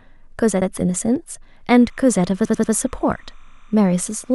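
At 0.61 s, repeated frames: a 69.7 ms run of compressed audio, consistent with three frames, was sent twice, so the speech stutters briefly. From 1.70 s to the end, timecode bleed from a nearby 30-frame-per-second code line leaks in, adding a faint chirping warble between tones near 1 and 2 kHz, about 40 dB below the speech. At 2.44 s, repeated frames recur: a 92.9 ms block plays three extra times, a stuttering loop that adds 278.6 ms.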